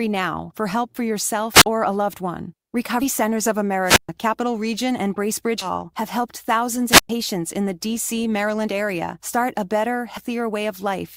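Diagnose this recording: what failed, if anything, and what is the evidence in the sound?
The speech breaks three times with a short surge of hiss or static, a hole of near silence, and the speech coming back: at 1.53 to 1.66 s (a silence of about 46 ms), 3.84 to 4.09 s (about 126 ms) and 6.88 to 7.10 s (about 112 ms). This is wireless microphone squelch dropout in the analogue radio link. The transmitter's signal faded, noise rose at the receiver, and its squelch muted the output until the carrier returned.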